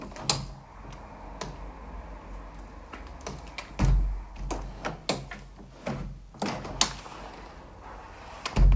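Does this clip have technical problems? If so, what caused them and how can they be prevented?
No, this audio has no technical faults that need fixing or preventing. It has passed through a call path, and nothing is heard above about 8 kHz, which fits a wideband codec such as G.722 working as intended.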